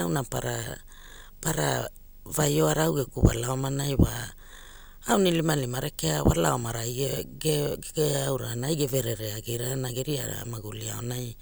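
From start to finish, a screen or video cable is coupling into the audio path, producing video or display buzz under the speech. The picture's field scan leaks in as a steady buzz at 50 Hz, carrying a gritty hash above it, and the line scan adds a thin, very high whine at 15.6 kHz. Together they sit roughly 30 dB below the speech.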